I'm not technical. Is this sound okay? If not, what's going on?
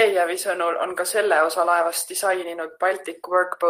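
Yes, nothing stood out as a problem when listening to this recording.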